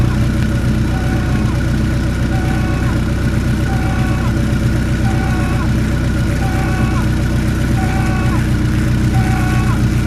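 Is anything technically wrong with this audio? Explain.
No, nothing technically wrong stood out on listening to this audio.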